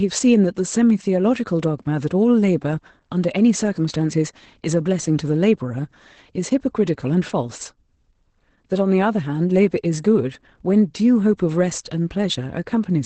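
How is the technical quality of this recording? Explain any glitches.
The recording is held back by one fault that runs through the whole clip: Opus voice compression. The encoder works in its speech-prediction (SILK) mode at a low rate, consistent with roughly 12 kbps, limiting the band and coding the excitation coarsely. Nothing survives above about 8.7 kHz, so the speech sounds muffled, hoarse and slightly robotic throughout.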